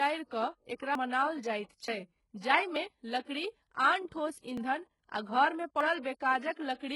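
Throughout the speech, the upper spectrum has a synthetic, gritty quality. S sounds come across lispy and metallic. This is likely HE-AAC compression with heavy damage, consistent with a very low bitrate of around 12 kbps. The treble is rebuilt from copied lower bands rather than coded, so its harmonics don't line up with those below. On a spectrogram, the region above the crossover shows blocky, repeated patterns under a coarse envelope.

Six abrupt skips in the speech occur at 0.95, 1.88, 2.76, 3.74, 4.57 and 5.81 s. Each is likely a dropped buffer (overrun). Samples were overwritten before they could be read, so a stretch of audio vanished and the two sides were butted together with no gap. Roughly 70 ms is missing at 0.95 and 5.81 s, about 50 ms at 1.88 s, and around 20 ms at each of the others. On a waveform, each shows as a sudden discontinuity with no silent region.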